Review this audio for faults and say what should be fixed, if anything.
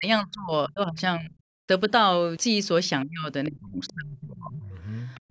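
Speech suppressed in double talk at 0.0 to 1.0 s, 1.18 to 1.37 s, 3.05 to 3.28 s and 3.47 to 4.72 s: the speech sinks by roughly 25 to 35 dB in patches. This is likely an echo canceller mistaking the talker for loudspeaker echo while both sides spoke, and pulling everything down. To prevent it, tune the canceller's double-talk detection so near-end speech is kept when the far end is active.

The other side's voice leaking through at 3.87 to 3.94 s and 5.15 to 5.2 s: brief scraps of a second voice sit roughly 25 to 30 dB below the main speech. These are likely loudspeaker playback that the echo canceller failed to subtract fully from the microphone. To prevent it, let the canceller adapt to the speaker-to-microphone path properly, or use a headset.

Background gated by the echo canceller from 5.2 s to the end: right after the second leak, the room sound drops by about 40 dB for around 100 ms. 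The canceller clamped the microphone hard while the loudspeaker played. To prevent it, replace hard gating with gentler residual suppression plus comfort noise.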